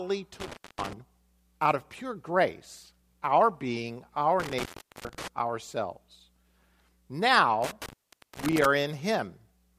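Speech with an intermittent contact fault, like a loose cable briefly opening. Dropouts occur at 0.40–0.93 s, 4.40–5.28 s after "pure grace our being", and 7.63–8.66 s. The line goes dead for about 0.25, 0.41 and 0.51 s, with crackle at the edges.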